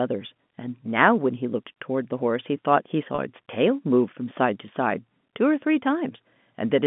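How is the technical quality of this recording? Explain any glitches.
There is one brief glitch, at 3.15 to 3.18 s, in telephone-band audio carried by G.711 coding that passes roughly 150 Hz to 3.5 kHz.

Packet loss with pitch repetition: about 30 ms of audio went missing in transit, which fits a single lost packet. The receiver filled the hole by repeating the last pitch period it had received. Because the gap is so short, the patch sounds like a slightly held, buzzy moment rather than a dropout, before the sound picks up again.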